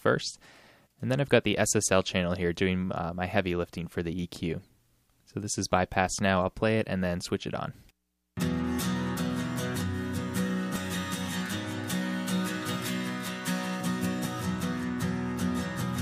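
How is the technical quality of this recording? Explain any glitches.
The recording has one clear fault in its final seconds. A doubled audio track starts abruptly at 11.57 s and runs to the end. A second, full-band copy of the sound trails the original by roughly 400 ms at around 10 dB lower, most likely from a slower capture path or an edit leaving two misaligned copies. It gives a dry, room-free echo.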